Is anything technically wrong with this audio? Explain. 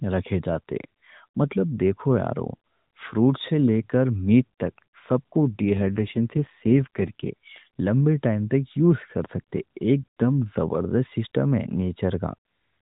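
Yes. From 5.56 to 7.30 s, an AMR rate drop turns the speech rougher and more synthetic, which points to the mobile codec falling from 12.2 to 5.9 kbps. The link traded voice detail for error protection. On a spectrogram the harmonics blur into buzzy smears, but the narrowband 4 kHz ceiling stays put and the waveform shows no gap.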